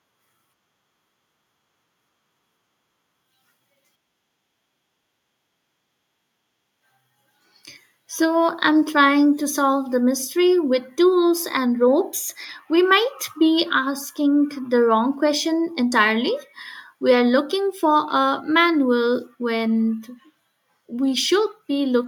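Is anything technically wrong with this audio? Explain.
No, nothing is technically wrong with this speech recording. There is no fault to explain.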